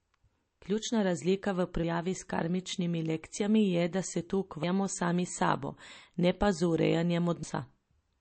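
Throughout the speech, the sound is watery and swirly, with chirpy, metallic s sounds and nothing above 8.3 kHz. This is likely MP3 compression, and it fits a low bitrate near 34 kbps: the encoder cut the treble and let weak frequency lines flicker between frames.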